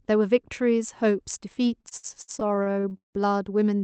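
From 1.81 s to 3.16 s the speech drags and stutters, catching on itself thirteen times as short stretches of sound are held and stretched, the longest hold about 158 ms, together roughly 474 ms, a third of that span. This is repeated stalls (stutter): packets arrived late, the jitter buffer kept running dry, and the receiver extended the last sound until data resumed. Nothing is lost, only delayed. The Opus call path limits the audio to about 8 kHz.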